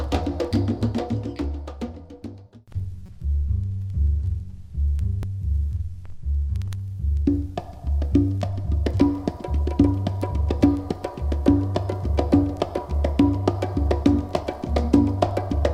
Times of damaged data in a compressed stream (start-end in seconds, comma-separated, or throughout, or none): 3.05-3.09, 5.23